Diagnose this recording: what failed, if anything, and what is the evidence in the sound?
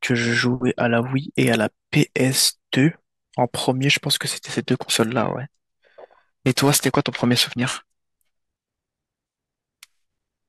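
From about 4.47 s to the end, the speech picks up a rough, metallic edge that is strongest on sibilants and bright consonants and drops away in the pauses. That points to periodic clock jitter at the converter. Interference is shaking the sample clock at a steady rate of roughly 1 kHz. Each frequency in the speech gets sidebands about that far above and below it, and the effect grows with frequency, which is why the high end sounds grainy.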